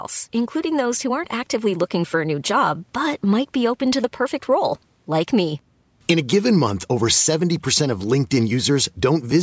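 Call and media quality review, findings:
No faults found in the speech; the call microphone processing path is band-limited to 8 kHz with its high-pass taking out the lowest bass, as expected for that chain.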